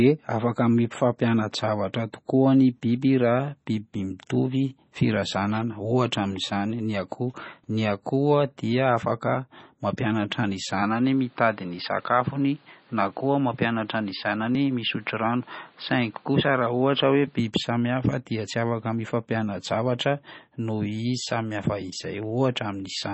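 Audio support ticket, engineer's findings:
Whole clip. Treble gone above 8 kHz. Watery, swirly texture, metallic s sounds, smeared onsets. Likely MP3 compression, heavy. Starved encoder truncating the band and dropping weak lines frame to frame. Fits a bitrate near 24 kbps.

10.82 to 17.39 s. Speech turns dull and boxy, then clears. No gap at either switch. Level about the same. New background noise, well under the speech. Likely input switched to a poorer device with a narrower band.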